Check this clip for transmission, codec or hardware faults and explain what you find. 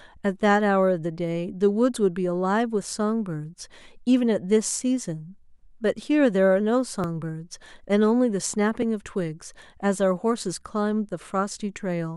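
Two brief splices in the speech at 7.04 s and 8.82 s, each heard as a point where the sound jumps slightly ahead. The likely cause is a dropped buffer (overrun): the capture software fell behind, the hardware overwrote a block, and the audio either side was butted together. Only a few milliseconds go missing at 7.04 s and a millisecond or two at 8.82 s, so no syllable is lost. A waveform shows an abrupt discontinuity with no gap, and a spectrogram shows a thin vertical broadband line at each point.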